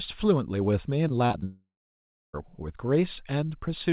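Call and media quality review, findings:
Choppy, robotic speech from 1.08 to 1.44 s: several short holes, longest 36 ms, patched by repeating the previous sound. Repeated packet loss (robotic sound); jitter-buffer concealment filling roughly a quarter of the stretch.

From 1.44 to 2.35 s, a fading buzz drops into about 0.67 s of silence; roughly 0.9 s of speech never returns. Likely a long network dropout, with concealment decaying to silence.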